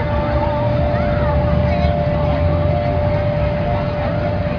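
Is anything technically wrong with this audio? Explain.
No, nothing stood out as technically wrong on listening.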